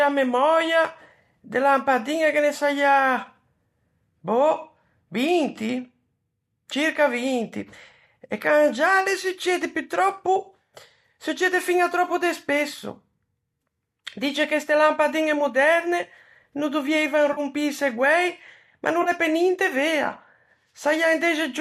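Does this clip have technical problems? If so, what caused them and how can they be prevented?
Yes. AAC frame loss with concealment hits the speech twice, at about 17.33 to 17.40 s and 19.02 to 19.09 s. Each gap is about 40 ms, which points to four lost frames. The decoder filled each gap from the last good spectrum, leaving a brief smeared, phasey patch. This is likely over a low-delay AAC link, and can be prevented with forward error correction or packet redundancy on the transport.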